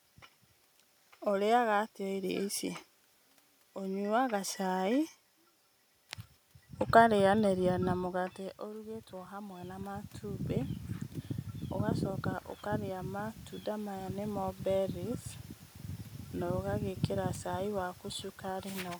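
At 7.95 s, just after "ũkarĩyanĩria na", the level at the mic drops by about 14 dB as the talker seems to lean back around 8 s. The automatic gain control then starts rising, pushing its gain up by about 5 dB over the next 2.6 s to 10.54 s. You hear the voice and the room noise swell together. It happens again from 12.68 to 15.27 s, with a climb of about 4 dB.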